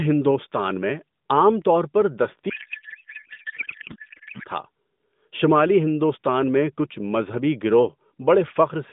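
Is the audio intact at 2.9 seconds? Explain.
No. At 2.9 seconds the clip is inside a codec payload misread running from 2.50 to 4.46 s, just after "میں عام طور پر". Octet-aligned AMR frames are being unpacked as bandwidth-efficient, so the decoder takes bits from the wrong fields and the speech turns into garbled, warbling noise that barely tracks it.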